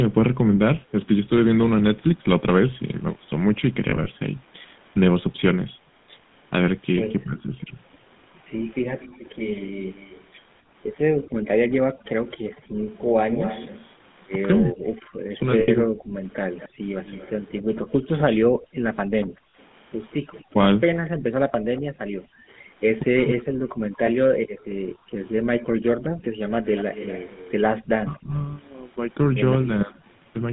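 Overdone noise removal runs throughout. The background drops and breaks up into twinkling specks. The GSM full-rate codec also colours everything. The band runs from 150 Hz to 3.6 kHz. The speech is plainly buzzy and gravelly, which fits a 13 kbps codec.

From 3.9 to 4.08 s, lost GSM frames total 60 ms, scattered over 160 ms. Each gap is filled by repeating the last good frame, heard as brief metallic ringing. Further losses come at 15.6 to 15.69 s (80 ms), 19.51 to 19.54 s (40 ms) and at 24.06 s (20 ms).

From 7.24 to 7.72 s, the speech dips by about 15 dB. This is likely speech suppressed in double talk, where the echo canceller turns down its own talker along with the loudspeaker echo. Deeper dips of about 40 dB follow at 14.64 to 15.91 s and 20.53 to 23.49 s. Another, of about 30 dB, comes at 28.05 to 29.69 s.

From 9.0 to 22.24 s, a faint copy of the speech follows 246 ms behind, about 20 dB down. 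This is likely echo leak, where loudspeaker sound reaches the microphone and returns. It recurs at 26.69 to 29.94 s with a 236 ms delay.

From 11.23 to 12.83 s, the background is gated by the echo canceller. The room sound drops out by about 33 dB, then returns. Gating recurs across 16.19 to 27.84 s, with drops of up to about 40 dB.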